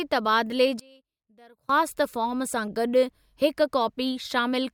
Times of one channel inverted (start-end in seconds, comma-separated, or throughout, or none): 0.80-1.69